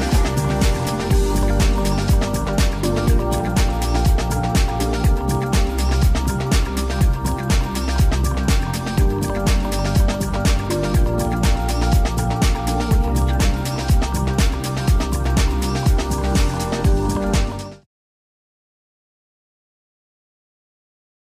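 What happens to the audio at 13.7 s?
Nothing goes wrong at 13.7 s; the audio plays through that moment intact, with no dropout, click or change in level.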